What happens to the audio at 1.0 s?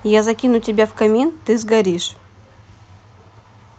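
Nothing goes wrong at 1.0 s; the speech passes through the call path intact, with no dropout, glitch or other fault at that moment.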